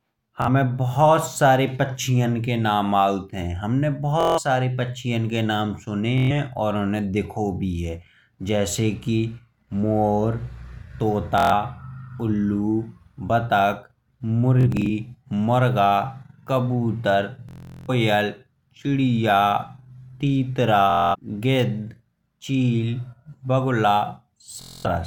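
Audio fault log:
0.42–0.49, 4.21–4.39 (after "नाम आऊत हैं हमने"), 6.18–6.31, 11.38–11.53, 14.61–14.90, 17.49–17.90 (longest, about 0.39 s lost), 20.90–21.16 (before "गिद्ध चील"), 24.62–24.86 s: Bluetooth stutter. Late or lost packets made the receiver replay a slice of about 23 ms, giving a buzzing, machine-gun repeat rather than silence or a click. The audio then jumps ahead as if it had kept playing. At 14.61 the losses are scattered across about 0.28 s, the longest run about 46 ms.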